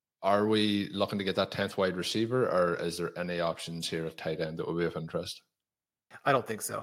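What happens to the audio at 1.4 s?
Nothing goes wrong at 1.4 s: the speech there plays through intact, with no dropout, click, distortion or other fault.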